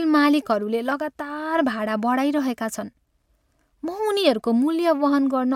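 Nothing stood out on listening to this speech recording.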